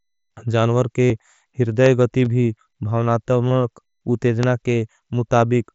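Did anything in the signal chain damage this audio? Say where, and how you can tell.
Yes. The Bluetooth link between headset and phone dropped audio, which was concealed. At 1.05 to 1.10 s about 60 ms is missing, heard as a buzzy held tone with a slight warble as speech resumes. Shorter patches sit at 2.25 to 2.26 s and 3.49 to 3.51 s.

A loud pop, a single sharp click, lands at 1.86 to 1.88 s, just before "गति भी", and again at 4.43 to 4.45 s. It peaks around 15 dB above the speech, which continues underneath. The likely cause is a voltage step in the analogue or driver stage.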